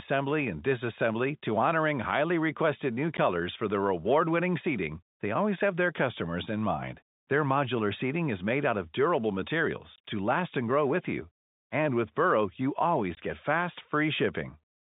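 At 3.17 s, just after "honoring highly requested new" and before "for their", there's a 10 ms dropout. More follow at 9.96 to 9.98 s, right before "to last and grow", and at 13.15 to 13.17 s, ahead of "get fast", each 20 ms long. That's packet loss filled with silence: the receiver plays dead air where packets went missing, so the holes have hard cut edges. The lengths point to 10 ms packets, with one lost and then two in a row, over a narrowband G.711 line.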